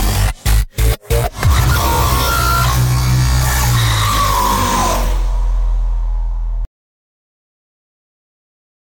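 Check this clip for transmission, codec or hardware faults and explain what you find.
One fault is present. From 6.65 s to the end, an audio dropout to silence: the sound cuts off mid-flow into silence with no room tone, likely from the input being lost while recording continued.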